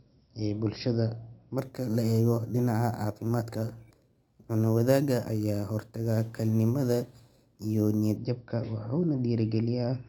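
From 1.58 s, just after "ee bulshada", until 8.17 s, the speech carries a bright metallic fizz at about -25 dB that follows its level. This is imaging from sample-and-hold upsampling: repeated samples without smoothing mirrored the spectrum into 6 to 12 kHz, which points to 12 kHz audio raised to 48 kHz.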